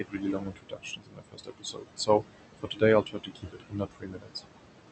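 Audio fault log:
throughout, noise suppressor artifacts: The background sinks away in the gaps and rises again beneath the talker. The suppressor judges each frequency band frame by frame and cuts whatever it reads as steady noise by about 21 dB. The room noise sits only about 9 dB under the speech.
0.00–2.24 s, 2.59–2.82 s, 3.03–4.44 s, speech cut by the noise suppressor: Parts of the speech go faint or swallowed, with soft consonants and word endings dipping out. In the first span, roughly one and a half seconds of speech are pulled down, by up to about 22 dB. In the second, about a fifth of a second drops by up to about 17 dB. In the third, about a second falls by up to about 22 dB. The suppressor mistook these quiet stretches of speech for background noise.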